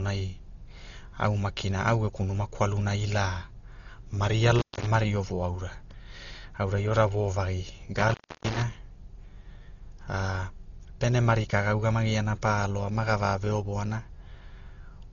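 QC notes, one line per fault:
Throughout: Dolby Digital compression, likely at a very low bitrate around 32 kbps. The encoder strips the top band and starves many frequency lines of bits, so nothing sounds above 6.9 kHz, the speech turns dull and heavily damaged, and dither noise flutters roughly around tonal parts.
4.59–4.86 s and 7.97–8.62 s: intermittent contact. A loose connection opens briefly, about 220 ms the first time and about 307 ms the second, so the sound drops out with crackle at each edge and faint hiss fills the gap.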